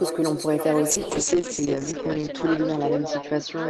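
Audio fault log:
throughout echo with no canceller: A quieter, thinner copy of the speech trails it by roughly a third of a second, about 7 dB down. The far loudspeaker is being picked up and returned.
0.9 s to end, call bitrate drop: Speech turns rough and muffled, with highs cut from 20 kHz to 8 kHz for 1.34 s. This points to the encoder falling from about 32 to 8 kbps.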